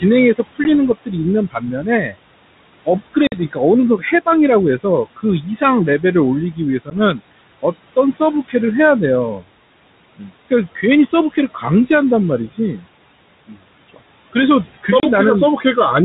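Noise suppressor artifacts run through the whole clip. The suppressor pulls the room noise, which sits about 16 dB under the speech, down by about 21 dB in the gaps, then lets it back up under each phrase. The background pumps in and out. On a spectrogram the noise floor appears as ragged, blotchy patches that vanish between phrases and reappear beneath the speech energy.

Speech cut by the noise suppressor starts at once, from 0.0 to 2.15 s, with drops of up to about 19 dB over roughly half a second of sound. The suppressor mistakes quieter speech for noise, so soft consonants and word endings sound swallowed. It recurs from 2.85 to 8.54 s (about 17 dB, most of a second in total), 10.17 to 11.9 s (about 18 dB), 12.52 to 12.86 s (about 15 dB), 13.48 to 14.86 s (about 19 dB) and 15.57 to 15.77 s (about 8 dB). In the waveform these look like sudden dips in the envelope, and on a spectrogram the weak high-frequency consonant energy is dimmed.

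Packet loss on an ADPCM call interrupts the audio at 0.64 s (10 ms), 3.27 s (50 ms, likely several packets in a row), 6.9 s (10 ms) and 15.0 s (30 ms). Each loss leaves a hard-edged silent hole, seen as a flat gap in the waveform and a full-height blank column on the spectrogram. When the sound resumes, the decoder's predictor and step size no longer match the sender's, so it returns slightly distorted and settles within tens of milliseconds. The G.726 coding at 32 kbit/s is light and band-limited below 4 kHz.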